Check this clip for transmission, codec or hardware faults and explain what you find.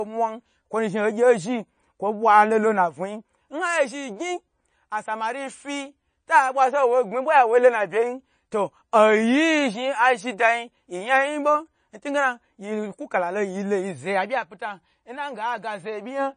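One fault runs through the whole recording: heavy lossy compression of the speech, most likely MP3 compression. From start to finish the sound is watery and swirly, s sounds turn metallic and chirpy, and consonant attacks smear. Nothing is present above 9.4 kHz. Short of bits, the encoder cut the treble at that fixed point and zeroed weak frequency lines, which flicker on and off between frames. The damage suggests a low bitrate, around 32 kbps. On a spectrogram this shows as a hard horizontal ceiling at 9.4 kHz, with speckled, blotchy holes below it. In the waveform, transients look softened, with pre-echo ahead of sharp onsets.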